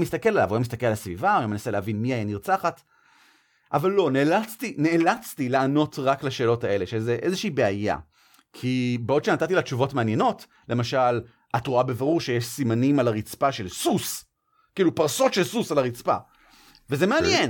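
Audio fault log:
The signal carries no technical fault that a listener can pick out at any point.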